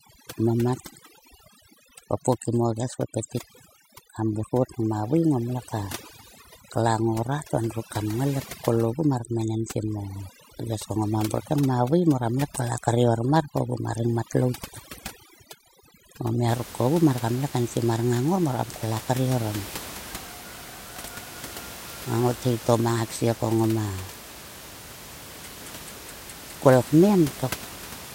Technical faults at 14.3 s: overdone noise removal

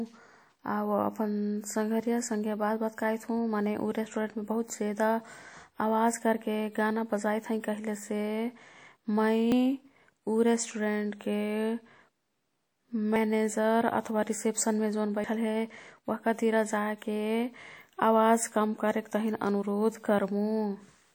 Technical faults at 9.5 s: WMA compression; dropped buffer (overrun)

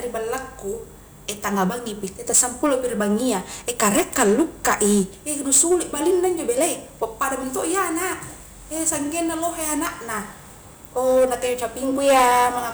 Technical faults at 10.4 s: hard clipping

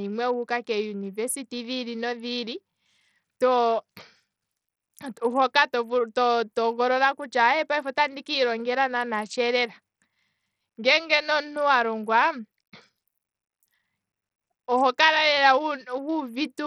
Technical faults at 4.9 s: Bluetooth SBC compression

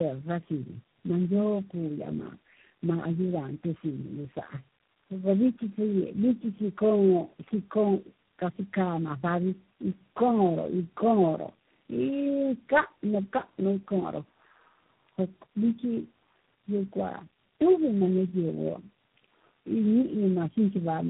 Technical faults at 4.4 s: tandem speech coding

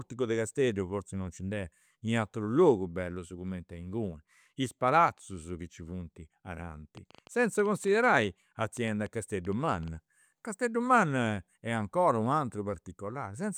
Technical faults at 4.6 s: none

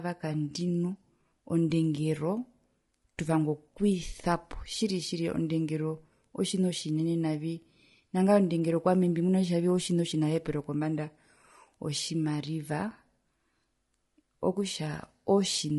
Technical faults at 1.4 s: low-delay AAC compression

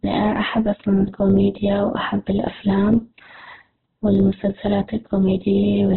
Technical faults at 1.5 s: Opus compression

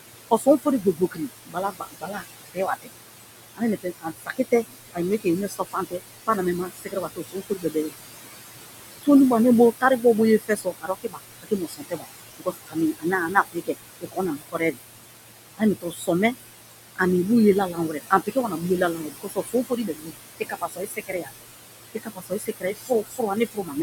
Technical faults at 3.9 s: noise suppressor artifacts; speech cut by the noise suppressor

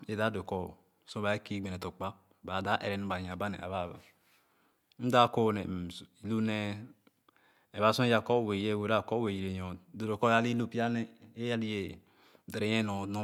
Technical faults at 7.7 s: none

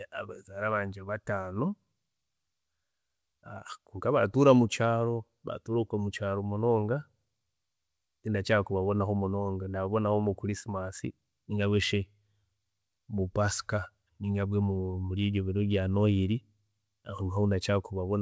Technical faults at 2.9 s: none

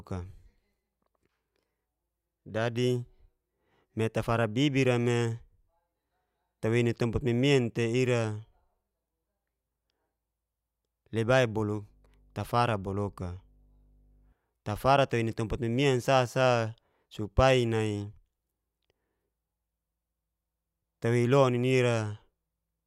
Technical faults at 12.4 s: mains hum

